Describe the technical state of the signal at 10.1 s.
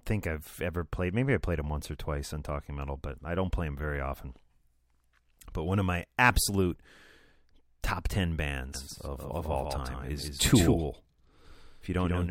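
At 10.1 s a doubled audio track is present, running from 8.74 s to the end. A full-band copy trails about 150 ms behind, roughly 5 dB quieter, likely from a second, slower capture path. On a spectrogram every feature repeats, shifted right, without decay.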